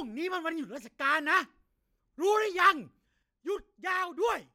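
At 3.23 s the level drops by about 7 dB in one step and stays down to the end, speech and background noise falling together. That's a sudden gain jump, likely a gain change applied instantly rather than ramped in.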